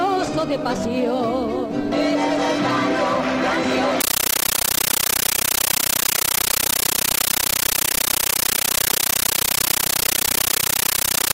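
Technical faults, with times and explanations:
4.01 to 11.34 s, compressed stream played as audio: the output passed a Dolby Digital bitstream to the converter as plain samples without decoding it. Each 13.3 ms burst of data, repeating at 31.25 Hz with silence between, becomes loud, chattering static that replaces the sound, consistent with a 640 kbps AC-3 stream.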